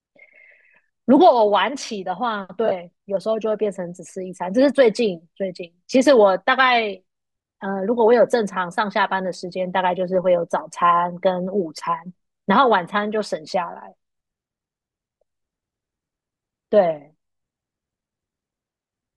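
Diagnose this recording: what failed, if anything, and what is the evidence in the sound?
Nothing failed; no fault can be heard anywhere.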